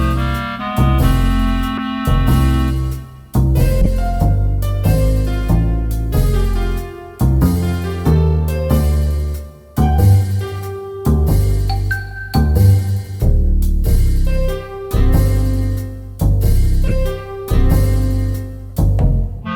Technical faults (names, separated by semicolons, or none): corrupt frame decoded